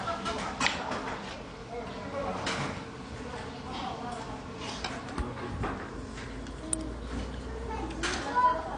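From start to finish the sounds are dull, with nothing above about 9.7 kHz, and they carry a plainly audible watery, swirly smearing. That points to heavy AAC compression, likely at a low bitrate around 32 kbps, where the encoder trims the top end and thins out detail it judges masked.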